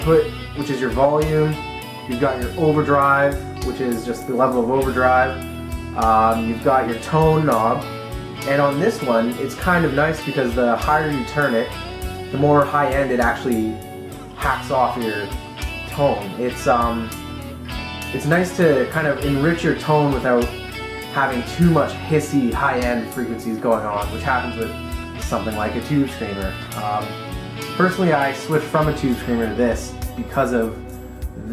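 No technical faults are audible.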